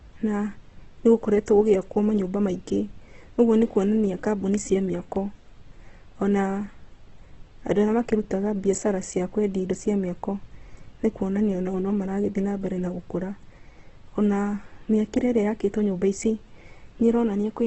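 Throughout the clip, the speech carries heavy Opus compression damage, likely from a starved encoder: nothing remains above 8.1 kHz, and bands are filled rather than dropped, so the sound turns rough and grainy instead of MP3's swirling, hollow holes. This fits roughly 12 kbps.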